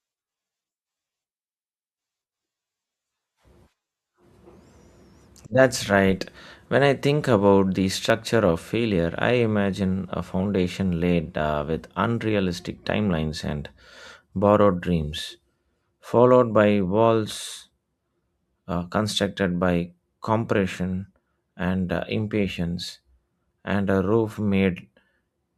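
At 8.10 s, between "I think about the" and "of failure I", the speech skips forward. There is no gap of silence. The sound simply jumps, and a very short slice, around 10 ms, is missing. This is likely a dropped buffer (overrun). The program failed to collect a block of samples before the hardware wrote over it. The audio on either side was then joined directly, which produces the jump.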